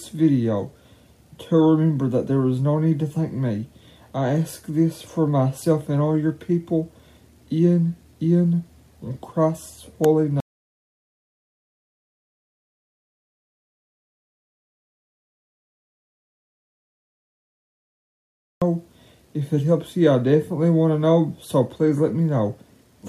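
At 10.40 s the sound cuts off abruptly mid-flow and does not return until 18.62 s, leaving an audio dropout to silence about 8.2 s long. The input was likely lost, through a disconnected device, a failed link or an accidental mute, while the recorder kept writing silence. What separates this from a natural pause or a heavy gate is the total absence of room tone: the gap is silent, and the sound resumes mid-flow rather than fading back.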